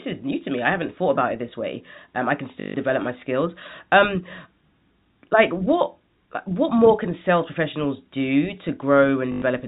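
Packet loss with last packet repeated occurs at 2.6 to 2.74 s, between "I can" and "my skills", and again at 9.32 to 9.42 s. The replayed audio produces a buzzy robotic stutter.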